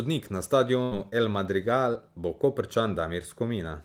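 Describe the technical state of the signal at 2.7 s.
Around 2.7 s the speech signal is intact, with no audible fault at that moment.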